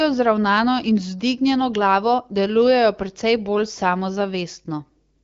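Nothing faulty can be heard in this speech.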